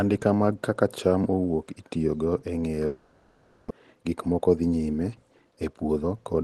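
Speech carried over a WebRTC call path, with audio band-limited near 12 kHz as expected for Opus at a low bitrate. From 2.86 to 3.71 s the sound decays into a fading buzz or hiss before resuming with roughly half a second missing, likely a long network dropout. The jitter buffer speed-up then trims pitch periods to drain about 150 ms of built-up delay each time. From 3.79 to 4.80 s this makes the speech run 12% fast at unchanged pitch, and from 5.56 to 6.43 s it runs 14% fast, sounding hurried.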